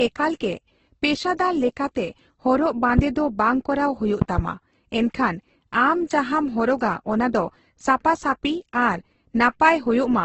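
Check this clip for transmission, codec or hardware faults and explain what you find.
Two kinds of fault turn up: a codec chain that has left its mark across the whole speech clip, and a few loud pops.

Transcoding between lossy codecs runs throughout: nothing survives above 8.1 kHz, and the artefacts sound like a very low-bitrate Opus pass later re-encoded as Vorbis. The second encoder spends its bits on the first one's damage, so both sets of smearing stack up.

Loud pops hit at 2.99 to 3.01 s, a single one roughly 20 dB above the speech, and at 4.22 to 4.41 s, two in quick succession at roughly 15 dB. They're likely voltage spikes from a plug, switch or driver glitch, with the speech carrying on underneath.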